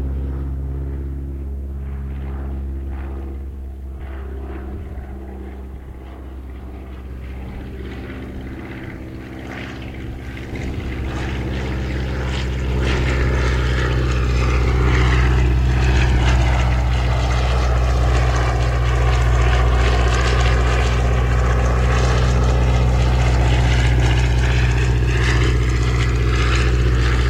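No technical faults are audible anywhere in this audio.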